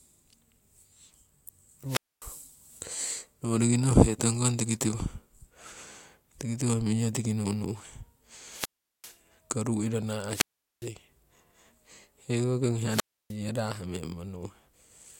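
Wireless microphone squelch dropouts occur at 1.87–2.25 s, 8.46–9.19 s, after "ruu iro" at 10.29–10.89 s, and after "hekoki ong" at 12.86–13.37 s. Each time the FM signal fades, hiss rises, and the receiver's squelch mutes the speech for 0.25, 0.39, 0.41 and 0.30 s respectively.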